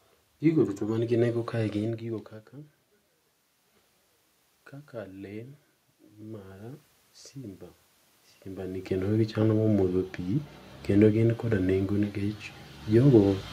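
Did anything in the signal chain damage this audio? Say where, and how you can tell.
Yes, in the call processing. From 4.91 s to 12.46 s the automatic gain rising is audible: after the input dropped by about 18 dB, the AGC slowly pushed its gain up about 6 dB, so voice and room noise swell together over several seconds.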